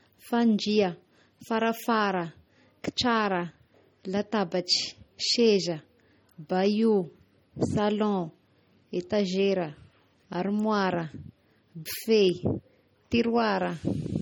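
MP3 compression artefacts run through the whole clip, from start to finish. Nothing is present above about 18.7 kHz, and the damage is plainly audible: the speech has a watery, swirling texture, sibilants pick up a metallic chirp, and onsets sound smeared. The likely cause is an MP3 encode at a low bitrate, around 32 kbps, where the encoder drops weak frequency lines that flicker in and out between frames.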